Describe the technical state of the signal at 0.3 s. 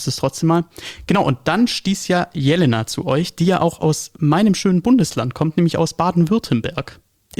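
At 0.3 s the signal is intact, with no audible fault at that moment.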